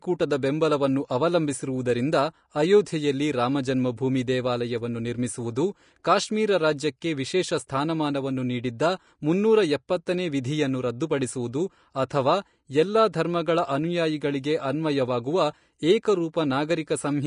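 From start to finish, the speech is band-limited, with nothing above 10.5 kHz. The treble sounds hissy and grainy, and consonant attacks are blurred. This is likely Vorbis compression at a low rate, around 36 kbps, where fine high-frequency detail is replaced by coarse, noise-like residue.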